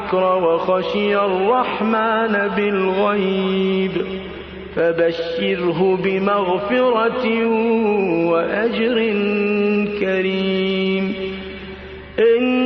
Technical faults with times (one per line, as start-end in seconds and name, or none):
none